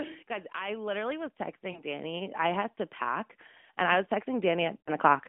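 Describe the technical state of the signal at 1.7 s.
Around 1.72 to 1.82 s the speech smears into a brief drawn-out stretch that sags in level and comes back rough. That is lost AMR speech frames: the decoder filled the gap by repeating its last good pitch and vocal-tract settings at falling gain, which fits two lost 20 ms frames.

Underneath, the whole stretch from 0.54 to 5.23 s swells steadily, voice and background together, by about 17 dB in all. This is automatic gain rising, where the gain control judged the input too quiet and kept raising its gain.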